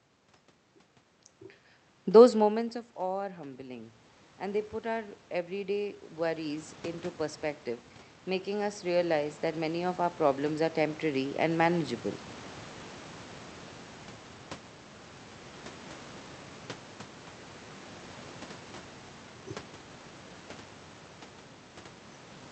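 Around 2 s the talker moves away and the level at the microphone drops by about 19 dB. From 2.05 s to 7.48 s the automatic gain rises, with the gain control slowly adding about 9 dB to compensate, so voice and room noise swell together over several seconds. The same automatic gain rising repeats from 8.24 s to 11.96 s, another slow lift of about 9 dB that brings the background noise up along with the speech.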